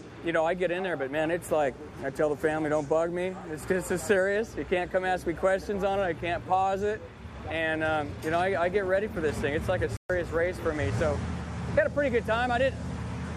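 At 9.97 s the sound drops to silence for 130 ms, returning at 10.10 s. This is a digital broadcast dropout: the receiver muted on corrupt or missing frames (roughly four), losing that material. The waveform shows a flat gap; the spectrogram, a blank vertical band.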